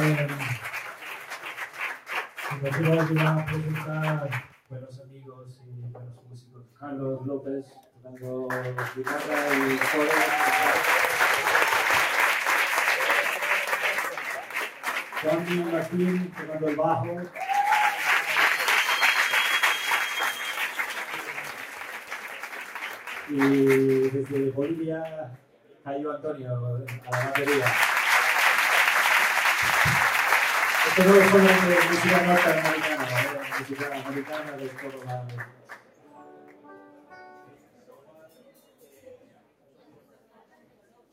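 A speech-style noise suppressor was left running on these sounds the whole way through. It treats steady material as noise, so the level pumps by about 10 dB. You can hear sound cut by the noise suppressor at 0.57–2.45 s, 4.41–6.82 s, 7.63–8.07 s, 14.12–15.25 s, 16.33–16.50 s, 20.33–23.30 s, 25.37–25.86 s, and from 33.37 s to the end. In each stretch, sustained or decaying parts sink by about 8 to 9 dB while sharper onsets mostly survive.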